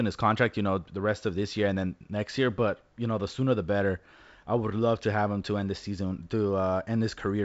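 Nothing stood out on listening to this speech recording, which comes through G.722 wideband telephone coding at 56 kbit/s with its content ending a little below 8 kHz.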